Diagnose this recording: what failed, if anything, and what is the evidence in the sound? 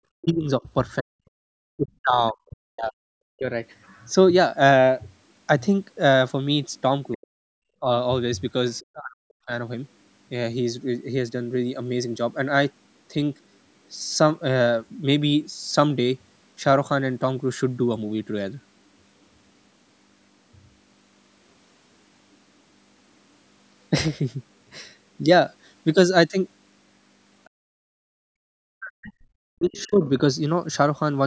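Speech suppressed in double talk, 0.16 to 3.48 s, 7.15 to 9.52 s and 28.58 to 30.04 s: the voice dips by roughly 40 dB in pieces while the far end is also talking. The likely cause is the call's echo canceller treating both talkers as echo and pulling the whole signal down.

Other side's voice leaking through, 3.84 to 8.79 s, briefly at 22.32 to 22.36 s, and 27.44 to 30.09 s: a faint second voice sits about 25 to 40 dB under the talker. It is likely loudspeaker playback that the echo canceller left in the microphone signal.

Background gated by the echo canceller, 27.5 to 28.3 s: the room sound drops by about 36 dB for most of that span while the loudspeaker plays, then returns. The canceller clamps the microphone hard during playback and releases once it stops, at the call-processing stage, where the band also ends at 8 kHz.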